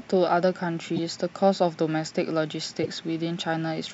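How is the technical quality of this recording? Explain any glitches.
Two brief glitches mar the speech. Each is a corrupt frame decoded: at 0.96–0.99 s (a single frame) and 2.83–2.85 s (about two frames), damaged compressed data was played anyway, misplacing energy into a short chirp, squeak or burst of noise peaking around -15 dBFS. A spectrogram shows narrow smeared blocks at odd frequencies; the waveform shows a sudden jagged spike.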